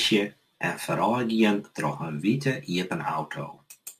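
From start to finish the speech carries crude rate conversion: the sample rate was lowered by a modest ratio, consistent with 48 kHz to 44.1 kHz, by simply discarding samples and keeping the nearest ones, with no anti-aliasing filter. The timing error repeats in a fixed pattern and creates inharmonic tones sitting roughly 25 dB below the signal, audible as a gritty fizz that rides on the louder and brighter parts of the speech.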